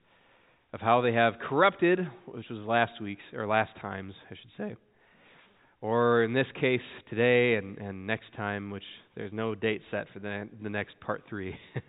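No faults detected; the audio carries the narrowband character of a call path, with nothing above 4 kHz, consistent with G.711 mu-law at 64 kbps.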